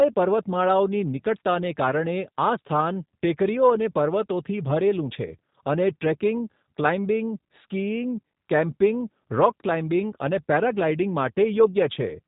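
From start to finish the speech carries G.729 codec damage, plainly audible. The voice is rebuilt from a modelled vocal tract filter, a pitch predictor and a sparse set of pulses, so it comes out rough, buzzy and slightly synthetic, with the narrow telephone quality of a coder that sounds like 8 kbit/s G.729A. On a spectrogram, energy stops sharply at 3.8 kHz, leaving a blank band above, and the harmonics below look smeared and blocky.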